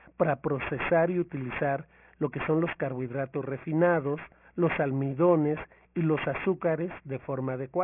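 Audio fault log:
Throughout, aliasing: the speech has a gritty, metallic edge on the sibilants, and the spectrum runs hard up to a wall at 3 kHz. That edge points to the clip being resampled down to about 6 kHz without an anti-aliasing filter. Everything above 3 kHz got mirrored back below it as unrelated tones, sitting only about 15 dB under the signal. That's why the esses and other hiss sounds come out harsh instead of just dull.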